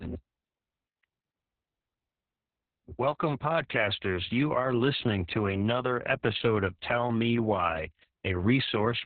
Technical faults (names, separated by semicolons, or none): Opus voice compression